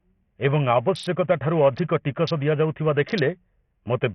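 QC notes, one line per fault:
Throughout, Bluetooth SBC compression: the speech is cut off above about 11.5 kHz, and a gritty, coarse noise with aliasing clings to the sound. The likely cause is SBC coding at a small bit pool, which sounds like something near 48 kbps. A plain low-pass filter would leave the remaining band clean, whereas here the grit and flickering treble reveal starved sub-band quantisation.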